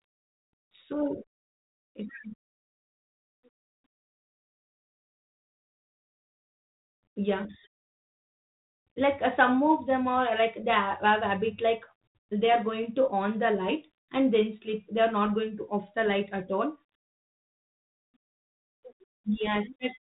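Nothing here counts as a fault: the speech comes through the 32 kbit/s G.726 ADPCM telephone path with the expected telephone-band ceiling around 4 kHz and only the light coding texture that rate leaves behind.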